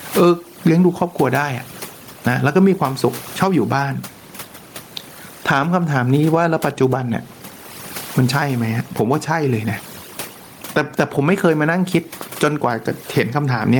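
From start to finish the background sits in near silence scattered with twinkling specks. This is overdone noise removal: a noise reduction stage set far too aggressively keeps switching individual frequency bands down or off whenever they come close to its noise estimate. The quieter parts of the speech fall inside those bands and are stripped out along with the room noise, which lies about 40 dB below the speech.

Also throughout, the gain swings by roughly 15 dB. Loud and soft passages end up pressed close together in level, giving a squashed, breathing quality. This is gain pumping. The likely cause is input gain set far too high for the microphone, so a fast limiter or compressor has to pull the level down sharply on every loud sound and then let it climb back in the gaps.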